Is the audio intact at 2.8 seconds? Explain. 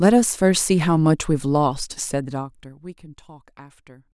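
No. At 2.8 seconds the speech carries a fast ticking, zipping texture as its level falls. This is zipper noise, running from 2.11 to 3.03 s: a drop of roughly 20 dB is applied in about 50 unsmoothed steps per second, and each jump clicks.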